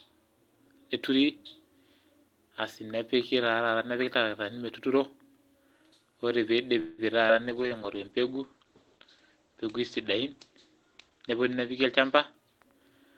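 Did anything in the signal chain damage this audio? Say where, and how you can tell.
Yes. At the network and jitter-buffer stage, a call audio freeze runs from 6.79 to 7.01 s: the last sound is stretched into a fading buzz or hiss for about 183 ms, then speech resumes where it stopped. That points to packets that were likely delayed, not lost. Nothing is missing, which separates it from a skip.

At 7.28 to 7.32 s there is a skip ahead: roughly 70 ms of speech vanishes and the two sides are joined with only about 14 ms of fill. Unlike the freeze, this is a forward jump, with audio dropped rather than a gap inserted.

At the codec stage, a call bitrate drop spans 7.42 to 12.81 s. Opus falls from 32 to 12 kbps, and the bandwidth narrows from 12 kHz to 8 kHz. Speech turns muffled and rough for about 4.1 s at the lowest rate. It is a timbre change with no timing disturbance.

At the jitter buffer, a slow-down from 7.55 to 7.98 s plays speech at 92% speed with unchanged pitch, adding 44 ms through repeated pitch periods. 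Sounds are drawn out, unlike a freeze's single held buzz.

At the jitter buffer again, a speed-up from 11.84 to 13.14 s runs speech at 109% speed at the same pitch, trimming roughly 150 ms in many tiny cuts. It sounds hurried throughout, rather than showing the one audible jump of a skip ahead.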